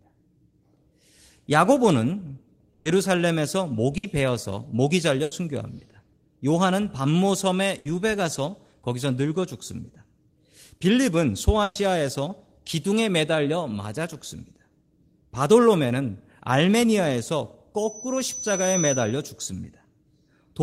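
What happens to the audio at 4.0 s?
A burst of packet loss hits the speech from 3.97 to 4.05 s: about 60 ms were lost or arrived too late, so the receiver stretches the last sound and fades it before resuming further on. Unlike a plain dropout, the gap is filled by this dying echo rather than silence, and the missing speech is skipped, not delayed.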